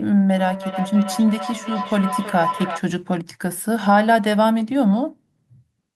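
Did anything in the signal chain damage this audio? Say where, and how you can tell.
Yes. From 0.35 s to 2.84 s a tone near 1 kHz swells out of the speech, pulsing about every third of a second and peaking at about 9 dB below the speech level. This is feedback howl, which arises at the call stage: two devices in the same room share the call, so sound from one loudspeaker reaches the other microphone and loops back with net gain. Each trip reinforces the frequency the loop favours, and the repeat rate reflects the loop's delay.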